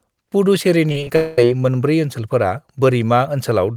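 Around 0.89 to 1.10 s the speech goes choppy. That's repeated packet loss: six short holes, the longest about 29 ms, each papered over by stretching the previous sound, so roughly 41% of that stretch is patched rather than real.

Then from 1.16 to 1.38 s there's a stretch where the speech is replaced by a continuation of the last sound, a buzz or hiss that never drops to silence. That's most likely a long network dropout, and the speech resumes at "मोनब्रै ओनसोलफोरा" with the missing part simply gone.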